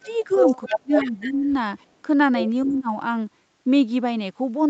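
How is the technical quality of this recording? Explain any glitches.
The recording has two recurring call faults in its first three seconds.

Speech suppressed in double talk occurs at 0.00–0.33, 0.69–1.45, 2.03–2.07 and 2.64–2.90 s. The speech dips by up to about 30 dB. The likely cause is an echo canceller turning everything down while both sides talked at once.

Echo leak occurs at 0.06–0.36, 0.63–0.73, 1.00–1.33 and 1.79–1.85 s. A faint copy of the speech follows 278 ms later, about 15 to 40 dB down. The likely cause is loudspeaker echo that the far end's canceller missed.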